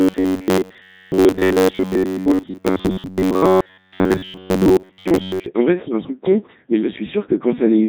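The whole clip passes through a Codec 2 vocoder, heavily damaged. The speech is resynthesised from sine waves, which fits 3.2 kbit/s, so it sounds buzzy and robotic.

From 0.01 to 5.46 s, a rigid metallic buzz at 93.8 Hz is imposed on the speech. This is likely robotic sound from repeated short buffers. Most of the audio is replaced by repeats of roughly 11 ms.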